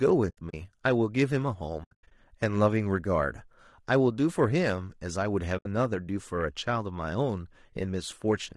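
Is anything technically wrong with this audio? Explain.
Yes. Throughout, the speech sounds rough and grainy, likely from low-delay AAC compression at a low bitrate around 32 kbps; a spectrogram shows noise filling between the harmonics and a thin top band.

AAC frame loss with muting occurs at 0.30–0.54 s, 1.83–2.12 s and 5.57–5.66 s. Lost frames are zeroed and faded through overlapping windows, leaving soft-edged holes, the longest lasting about 100 ms, visible as blank gaps in the waveform.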